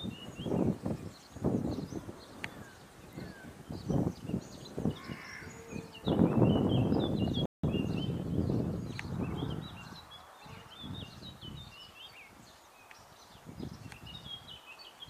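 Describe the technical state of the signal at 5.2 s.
At 5.2 s the signal is intact, with no audible dropout, click, distortion or other fault at that point.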